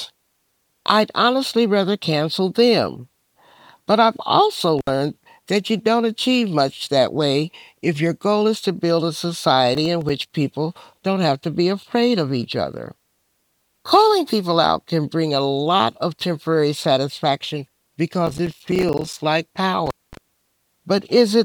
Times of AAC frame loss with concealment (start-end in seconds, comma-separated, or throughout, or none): none